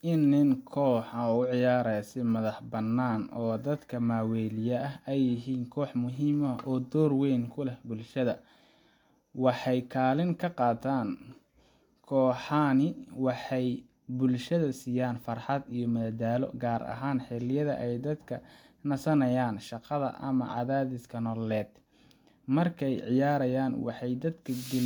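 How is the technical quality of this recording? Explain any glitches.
No glitches or technical faults can be heard anywhere in this speech recording. There is nothing in it that needs explaining.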